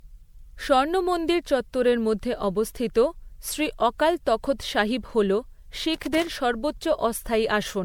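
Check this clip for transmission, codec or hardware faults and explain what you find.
Two faults are audible: lossy-codec damage across the whole clip, and a short burst of connector crackle near the end.

Generation loss runs throughout. The cause is likely repeated lossy coding, with the speech decoded and re-encoded as MP3 around five times, each pass requantising on a shifted frame grid so errors and spectral gaps accumulate. The result is swirly, hollow and smeared, more than a single moderate-rate pass would leave, consistent with roughly 96 kbit/s. Consonant attacks are blurred, and nothing remains above 19.9 kHz.

Loose connector crackle appears from 5.94 to 6.28 s, lasting about a third of a second. A worn or dirty contact is intermittently opening and closing, chopping the signal on and off. The result is an irregular scratchy burst of crackle laid over the speech for that stretch.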